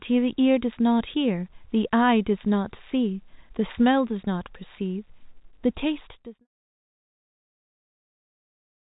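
Nothing in this speech recording is technically wrong. It is carried as telephone-band audio with nothing above 3.8 kHz, and the level eases smoothly down from around 5.5 s to silence at 6.48 s, as an editor's fade-out would.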